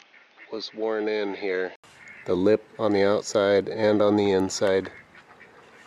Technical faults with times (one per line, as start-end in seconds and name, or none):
0.00-1.84 input switched to a poorer device